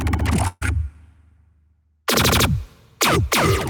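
At 0.47 s a burst of packet loss hits the stream: several consecutive packets never arrived in time to be played, leaving a hole of about 140 ms. The receiver bridges it by extending the last sound it had, letting it fade for roughly 138 ms, then a brief silence of about 10 ms, before the audio picks up again at 0.63 s with the stretch in between simply gone.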